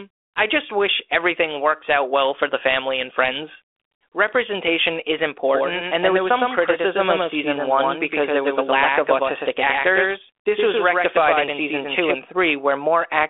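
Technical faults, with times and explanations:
5.48–12.14 s, doubled audio track: a second, full-band copy of the speech runs roughly a tenth of a second behind the original at about 5 dB lower level. It has no decay or room colouring, so it is not an echo, and it starts and stops abruptly at those two times. This is likely a second capture over a slower path or two misaligned copies in an edit, heard through the 250 Hz to 3.5 kHz telephone band of a 32 kbit/s G.726 link.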